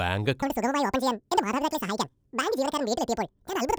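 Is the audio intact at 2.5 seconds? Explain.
No. From 0.42 s to the end of the clip, the audio is read two samples at a time (double speed): the reader takes each pair of consecutive samples as a single frame, as if the data were two-channel or twice as wide per sample. Every second of material plays out in half a second, so at 2.5 s the speech runs twice as fast and a full 12 semitones, one octave, higher. Any strong content above a quarter of the sample rate folds back.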